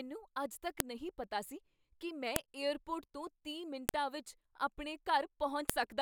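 Sharp, loud clicks cut through the speech at 0.80, 2.36, 3.89 and 5.70 seconds. The first falls between "ਅੱਜ ਤੱਕ" and "ਨਹੀਂ ਪਤਾ ਸੀ ਕੀ". The second follows "ਪਤਾ ਸੀ ਕੀ ਮੈਂ". The third sits between "ਤੋਂ ਤੀਹ" and "ਵਿੱਚ ਆਪਣੇ". Each is a file header played as audio. Separate WAV pieces were joined with their headers left in. Those header bytes play back as samples, giving a brief snap at each join.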